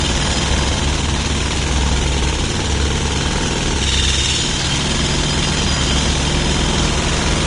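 From start to finish the sound carries what is likely Vorbis compression. Nothing gets through above 10.5 kHz, and the remaining treble is quantised so coarsely that detail turns to grainy hiss, with roughened tones and smeared attacks, pointing to a low bitrate around 33 kbps.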